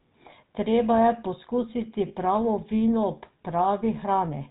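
From the start, the speech carries the sound of the GSM full-rate codec. The damage is plainly audible. The coder rebuilds the voice from a vocal-tract model driven by a sparse, regularly spaced pulse train, so fine detail in the excitation is lost. The result is a buzzy, gravelly roughness running through every phrase. Nothing survives above 4 kHz, so sibilants and brightness are gone. The character fits the 13 kbps full-rate coder.

From 2.08 to 2.13 s there are lost GSM frames. For these 40 ms, the decoder had no usable data. It repeated the parameters of the last good frame. That holds the sound as a brief rough, metallic ring instead of letting it move on. The gap length points to two dropped 20 ms frames. It is too short to fade fully to silence.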